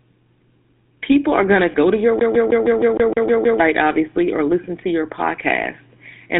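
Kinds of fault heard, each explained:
GSM full-rate codec: The speech has the coarse, buzzy grain of the original GSM codec, which models the vocal tract and drives it with a sparse, regularly spaced excitation. Much of the waveform detail is discarded, which fits the 13 kbps full-rate mode. The damage is plainly audible as a gravelly roughness on every voiced stretch. The band is held between roughly 150 Hz and 3.6 kHz, so the sound is thin and lacks low body and high-end air.
lost GSM frames: From 1.72 to 1.75 s the speech briefly turns into a short, rough, metallic ring instead of continuing naturally. This is what happens when a bad GSM frame is concealed by repeating the previous good frame's parameters. The span is too brief for the fade toward silence to develop. The length fits a single lost 20 ms frame, so the glitch reads as a quick smear rather than a dropout.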